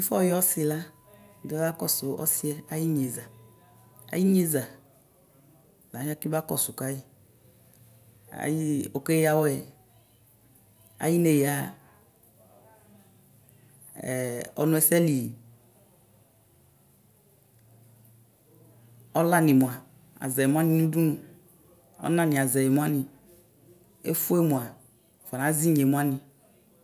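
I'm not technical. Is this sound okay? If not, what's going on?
Yes, nothing wrong can be heard anywhere in this recording.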